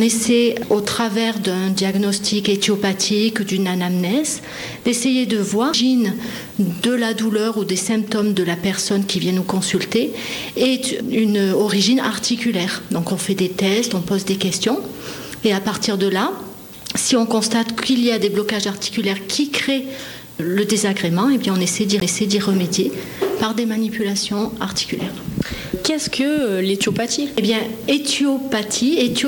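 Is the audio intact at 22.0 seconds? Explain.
No. At 22.00 s there is a CD skip: the laser jumped to another turn of the disc spiral, so playback mutes very briefly, heard as a short tick, and then resumes from a different point instead of continuing smoothly.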